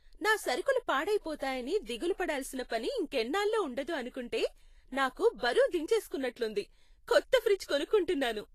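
Likely Vorbis compression, present throughout the speech: nothing remains above 14.2 kHz, and the treble below that is hissy and grainy. Its fine detail has been quantised so coarsely that it turns into noise, which fits a low bitrate near 34 kbps. Tones sound roughened and attacks blurred.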